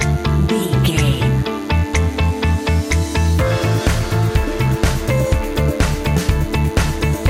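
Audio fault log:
throughout, DECT cordless phone buzz: a nearby handset or base pulses every 10 ms and the circuitry rectifies it, so there's a thin 100 Hz buzz with lots of harmonics, roughly 25 dB under everything else.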